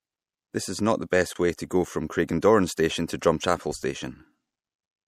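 Throughout, the encoder likely ran short of bits in MP3 compression, consistent with a rate around 64 kbps, so weak frequency lines drop in and out between frames. The speech sounds plainly watery and swirly, with chirpy s sounds and softened attacks.

From 1.33 to 1.36 s, between "is not the" and "way to go from", there is a gap at a join of encoded pieces. Separately encoded sections, about 4 s long, were joined with their start-up delay and end padding left in, opening a gap of about 24 ms with smeared edges before the speech resumes where it stopped.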